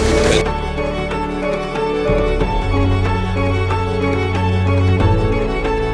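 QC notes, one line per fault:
Nothing to flag here; I listened all the way and didn't catch anything worth writing up.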